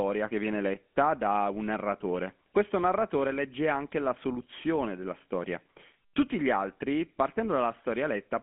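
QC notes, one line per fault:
Throughout, GSM full-rate codec: the speech has that gravelly, buzzy roughness of a pulse-excited vocal-tract model, plainly audible, which fits the old 13 kbps full-rate coder. The band is held to a phone line's 200 Hz to 3.4 kHz, with nothing above 3.8 kHz.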